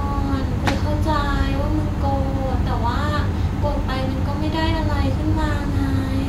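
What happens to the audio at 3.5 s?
Nothing goes wrong at 3.5 s; the speech carries on intact through that moment.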